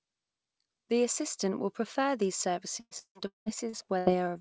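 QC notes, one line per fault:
2.80–4.09 s, repeated packet loss (robotic sound): right after "assistant will prefer these", the audio breaks up into six dropouts, the longest about 190 ms. Each hole is patched by stretching the last received sound forward, so about 45% of this span is reconstructed rather than real. With the holes this close together, each patch is soon followed by the next hole, giving a choppy, robotic texture with missing pieces. The band above 8 kHz is absent, which fits a G.722 call codec.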